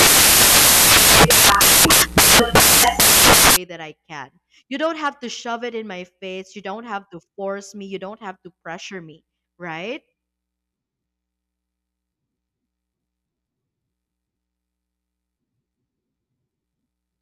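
Samples built from the wrong bytes, 0.00 to 3.56 s, before "that I can": each sample's bytes are misassembled, so low bits dominate, giving loud white noise.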